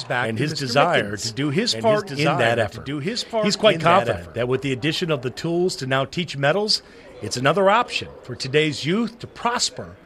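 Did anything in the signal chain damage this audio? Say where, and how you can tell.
Yes: from the start to 4.36 s a doubled audio track trails about 5 dB down, roughly a second and a half late, then stops abruptly, likely from a slower second capture path or a misaligned edit.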